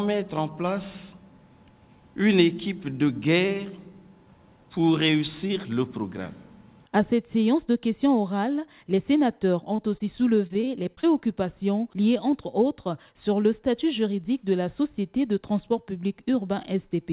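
From 9.76 to 11.05 s, repeated packet loss leaves gaps up to 31 ms, each filled by repeating the last sound, so the 4 kHz-limited audio turns choppy and robotic.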